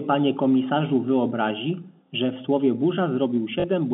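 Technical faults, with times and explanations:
3.60 to 3.64 s, packet loss with last packet repeated: about 40 ms of audio never arrived, which fits two lost 20 ms packets, so the receiver replayed the last good packet to fill the gap. The copy repeats every 20 ms, so the short run buzzes at about 50 Hz, a brief robotic stutter over the band-limited G.711 telephone sound. A gap left silent or faded out would leave a hole rather than this repeated tone.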